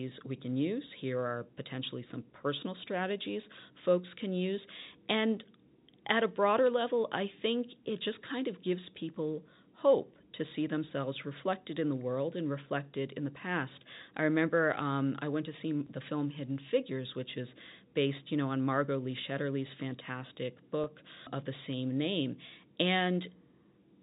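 At 20.84 to 20.86 s, just before "of the same name", packet loss with pitch repetition bridges about 20 ms, which fits two lost packets, by repeating the last pitch period. It sounds like a brief buzzy hold, not the silent gap or click of a plain dropout.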